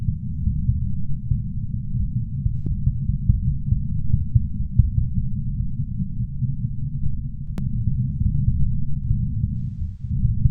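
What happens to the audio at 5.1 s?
Nothing goes wrong at 5.1 s; the sound carries on intact through that moment, with no dropout, click or distortion.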